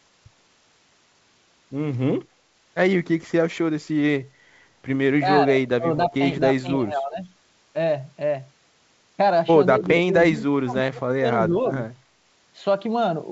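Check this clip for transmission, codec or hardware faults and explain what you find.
The speech drops in level in short bursts: 5.2–5.27 s, 5.44–6.14 s, 6.61–7.2 s, 9.79–10.14 s, 10.32–11.26 s and 11.48–11.53 s. The dips run from slight to roughly 30 dB deep, as if the talker were being ducked. This is likely speech suppressed in double talk. The echo canceller could not tell this talker apart from the far end's echo and attenuated both. Across the whole clip, nothing sounds above 8 kHz, which fits a wideband call codec.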